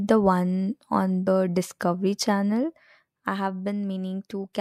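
At 1.26 s the speech jumps forward. This is compressed frames skipped: a couple of whole frames of the encoded stream never reached the output, either missing from the file or rejected by the decoder as damaged, so about 50 ms of audio is lost. The jump size fits a 24 ms codec frame.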